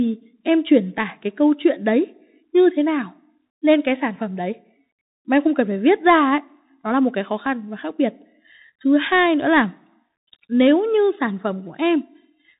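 From start to finish the speech runs through a Bluetooth CVSD headset codec, and the damage is plainly audible. Nothing gets through above about 3.8 kHz, s sounds come out scratchy, and a granular hiss sits underneath, all of which fits a 64 kbps one-bit delta link.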